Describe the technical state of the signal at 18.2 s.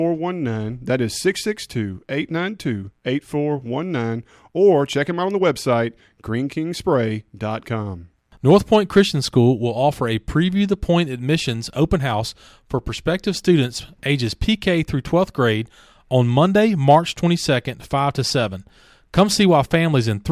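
At 18.2 s the speech signal is intact, with no audible fault at that moment.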